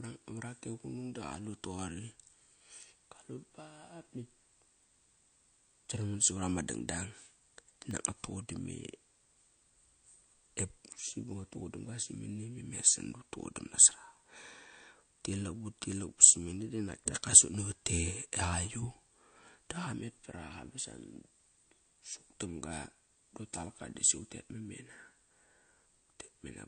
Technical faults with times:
0.00-26.68 MP3 compression
4.83-7.91 periodic USB or driver dropouts

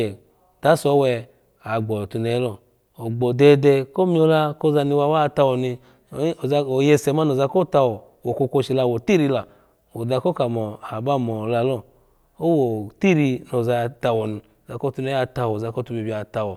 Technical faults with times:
none

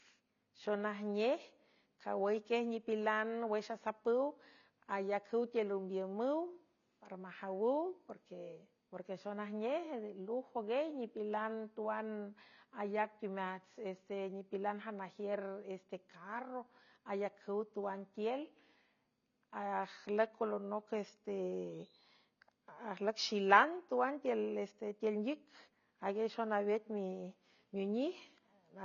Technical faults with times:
0.00-28.84 AAC compression

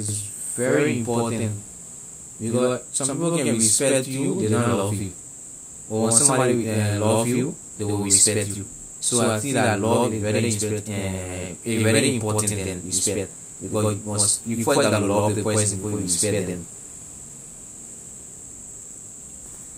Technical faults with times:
0.00-19.78 channel delay (doubling)

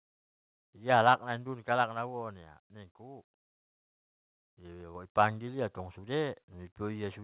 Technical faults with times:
0.93-1.13 microphone overload
1.14 microphone volume stepped down
3.18 microphone volume stepped up
4.95 microphone volume stepped up
5.19-5.22 microphone overload

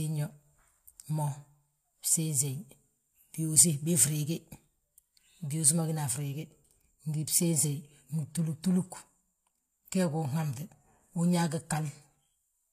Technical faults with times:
7.13-12.72 adaptive stream at a lower bitrate

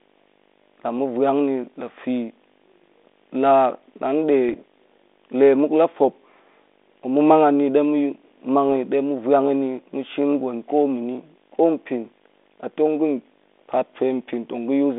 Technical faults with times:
0.00-14.99 video or display buzz
4.49-4.56 bit errors on an ADPCM link
8.69-8.75 bit errors on an ADPCM link

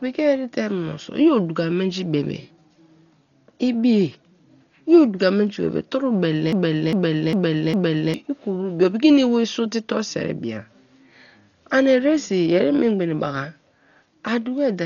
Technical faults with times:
0.00-14.86 Dolby Digital compression
6.53-8.14 broken-record loop

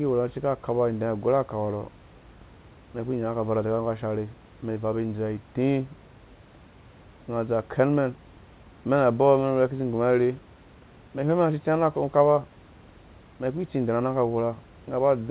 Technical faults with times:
none

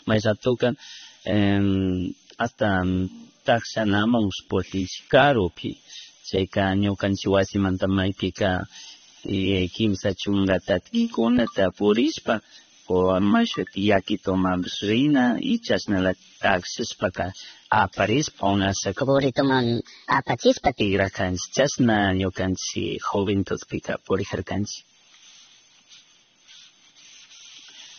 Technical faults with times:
0.00-27.99 low-bitrate audio saved at a high bitrate
19.01-20.81 section at the wrong speed

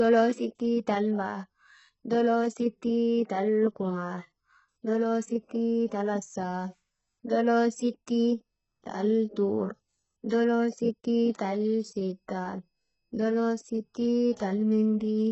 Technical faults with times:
0.00-15.32 HE-AAC compression

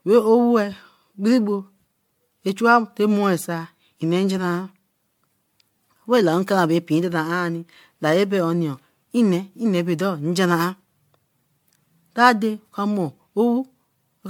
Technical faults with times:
0.00-14.30 generation loss

